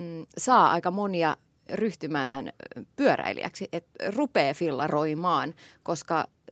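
A call audio freeze runs from 2.23 to 2.36 s: for about 110 ms the last bit of speech is drawn out into a short buzzy hiss that fades, and then the speech picks up exactly where it left off. Nothing is lost, but everything after it arrives about 110 ms later. The likely cause is packets held up in transit, so the jitter buffer ran dry and the receiver filled the wait. The speech stays band-limited to 8 kHz throughout.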